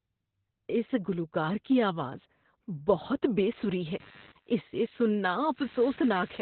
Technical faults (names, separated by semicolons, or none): Opus voice compression; computer activity noise